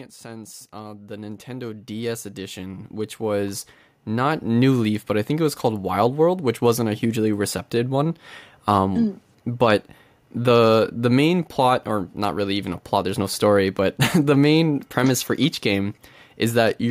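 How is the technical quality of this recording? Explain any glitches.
The recording has one gain fault. From 0.21 to 4.73 s, automatic gain rising: the AGC judged the input too quiet and lifted gain about 16 dB, so speech and background swell together.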